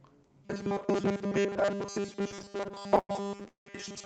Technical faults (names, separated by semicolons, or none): robotic sound from repeated short buffers; repeated stalls (stutter)